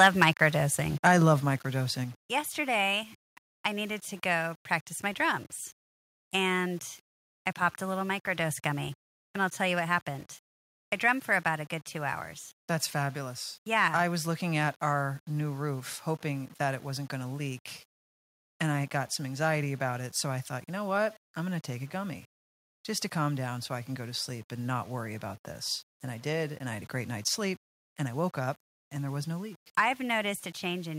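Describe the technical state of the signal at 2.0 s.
At 2.0 s the speech carries low bit depth without dither. It sounds like the signal is held to about 7 bits and rounded. The error tracks the signal, sitting roughly 30 dB below it. Quiet passages turn grainy, or dense ones take on near-steady hiss.

At 2.04 s the microphone volume is stepped down. Voice and background drop together by about 4 dB in one sudden step. The likely cause is call software cutting the device's input gain once.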